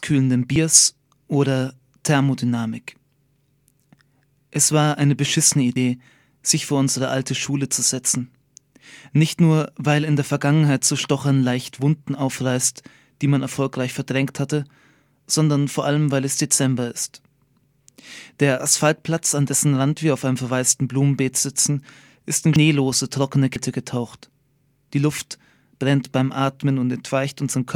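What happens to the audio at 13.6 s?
At 13.6 s the speech carries on intact, with no dropout, click, distortion or other fault at that point.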